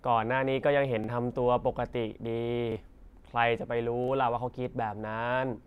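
At 1.04, 2.72 and 4.04 s, the speech stutters from a repeated buffer. Each time, new audio arrived late, so the same 40 ms piece plays twice, which fits a 40 ms buffer. A hard join marks each repeat, and about 40 ms of audio is lost.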